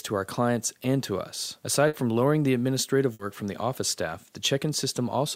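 At 1.87 s and again at 3.13 s, the sound briefly smears into a held, fading continuation of itself for about 60 ms, then jumps forward, ending near 1.96 s and 3.22 s. Both are bursts of packet loss. Packets never arrived in time, so the receiver stretched and faded the last sound it had to cover each gap. When playback resumed, about 60 ms of the original audio had been skipped each time.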